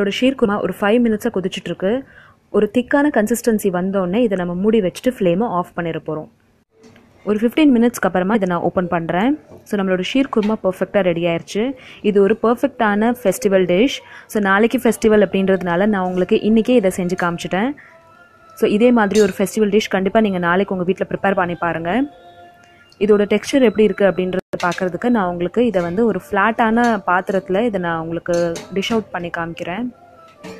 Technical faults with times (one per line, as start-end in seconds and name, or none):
0.44 damaged data in a compressed stream
8.34 damaged data in a compressed stream